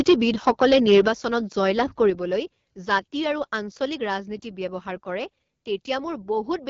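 Throughout, the speech carries the raspy, buzzy texture of the AMR wideband (HD Voice) codec at one of its lowest rates, which fits the 8.85 kbit/s mode. A spectrogram shows a hard ceiling with nothing above 7.5 kHz, and smeared, noisy fill near the top of the band.

From 0.00 to 1.08 s the loudest syllables crackle harshly, likely from microphone overload, with peaks driven about 8 dB past the converter's limit. On the waveform, a fair share of the peaks appear as flat-topped plateaus.

At 0.09 s the level drops suddenly by about 2 dB. The input gain was likely lowered in a single microphone volume step-down. Voice and background fall together, which shows as a clean step in the waveform envelope. Further drops follow at 1.08 s (about 6 dB, as the clipping ends) and at 2.10 s (about 4 dB).

From 2.93 to 2.95 s, just before "আৰু আঞ্চলিক", what is likely a brief overload flattens peaks by about 1 dB, adding a short crackle. 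A further step down of about 2 dB follows at 3.12 s, again just before "আৰু আঞ্চলিক".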